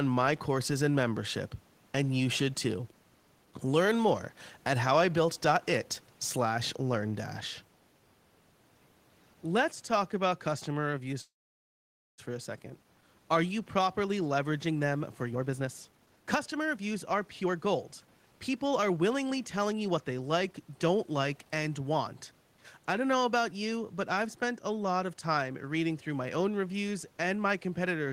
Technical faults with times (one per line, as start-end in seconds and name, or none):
11.21-12.20 call audio freeze
15.30-19.98 jitter buffer speed-up